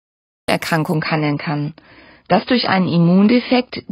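Cut-off start, 0.48 s: the clip opens on digital silence, and the speech bursts in mid-sound at 0.48 s with no natural attack or fade. The capture or stream evidently began late, so the beginning of that sound was never recorded and the audio starts abruptly.

Adaptive stream at a lower bitrate, 0.94 s to the end: the quality drops suddenly and without any gap. Nothing above about 5.2 kHz remains, so the speech turns dull and smeared, with more codec artefacts. This fits an adaptive stream switching from roughly 96 kbit/s AAC to about 16 kbit/s when the connection slowed.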